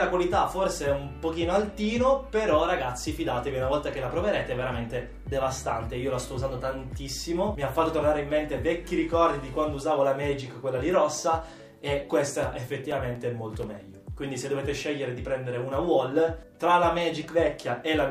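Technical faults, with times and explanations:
12.43–13.87 s, CD scratch ticks: seven short ticks arrive at a steady rate of about five per second, the longest lasting a few milliseconds. A scratch or blemish on the disc surface corrupts more data than the error correction can rebuild, and it passes under the laser once per rotation. Each time, the player fills the damaged stretch by interpolating or muting a few milliseconds of samples, leaving a brief click or micro-gap.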